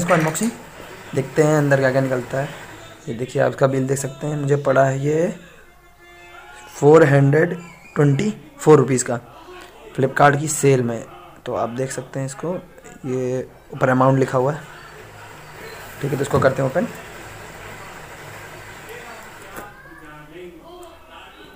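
Hard clipping hits three short peaks, at 6.87 to 7.03 s, 8.69 to 8.75 s and 10.21 to 10.28 s. Each is overdriven by about 4 dB. The peaks exceed what the stage can pass and are cut flat. Each burst crackles.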